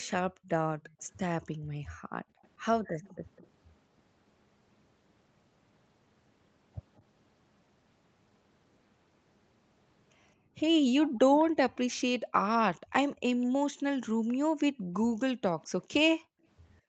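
From 0.08 to 3.47 s a faint copy of the speech trails the original by 205 ms, about 25 dB down. This is an echo leak, likely from a far-end loudspeaker whose echo canceller let its microphone's pickup slip back. Unlike room reverberation, it is a single distinct repeat at a fixed delay. Shorter, weaker scraps of the same 205 ms repeat appear at 6.97 to 7.02 s and 15.62 to 15.66 s, and a longer stretch about 25 dB down returns at 11.08 to 13.46 s.

Overlapping the first leak, from 0.3 to 3.04 s, the room background is gated by the echo canceller. For about a second in total it drops by as much as about 40 dB while the canceller clamps the microphone, then returns. A shallower dip of about 15 dB follows at 10.36 to 10.55 s, and from 13.79 s to the end the background sinks again by up to about 40 dB. What sets this apart from a network dropout is that only the background dips, and it comes back once the canceller releases.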